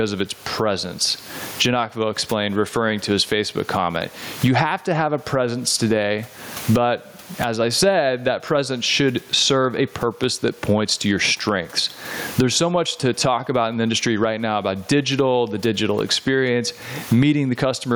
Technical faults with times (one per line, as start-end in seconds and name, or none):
0.00-17.96 gain pumping